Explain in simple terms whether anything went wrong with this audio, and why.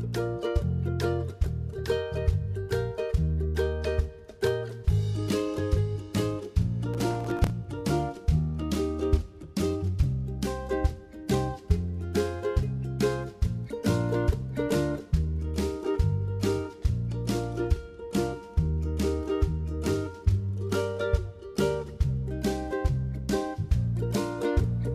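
From 6.94 to 7.50 s there is a short burst of gritty crackle over the sound. This is processor overload crackle: the computer fell behind, missing around fifteen tiny buffers of a few milliseconds each, and each missed slot replayed stale audio with hard edges.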